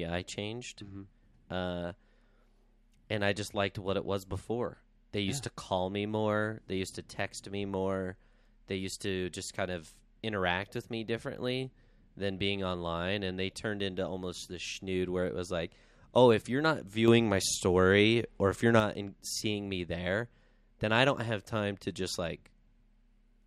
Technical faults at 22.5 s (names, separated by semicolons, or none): none